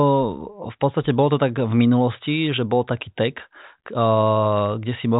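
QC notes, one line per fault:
Nothing to flag here: the speech comes over a G.726 ADPCM link whose faint coding texture points to the 40 kbit/s rate, with the band topping out around 3.8 kHz, and no faults turn up anywhere in it.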